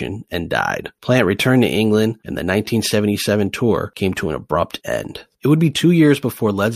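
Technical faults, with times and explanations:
No technical faults can be heard in this speech.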